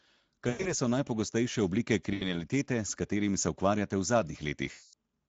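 Throughout, the speech sounds hoarse and grainy, with a noisy top end. This is Speex codec damage, which fits a mid-quality mode of around 17 kbps starving the excitation of bits.

From 0.49 to 0.73 s, just before "so najpogostejše oblike", the sound smears into a buzzy tone or coloured noise that fades. The same happens from 2.13 to 2.34 s, between "so najpogostejše oblike" and "s katerimi se", and again from 4.71 to 4.93 s. Each is VoIP packet loss concealed by the speech codec, with the decoder extrapolating the last pitch and filter while lowering the gain.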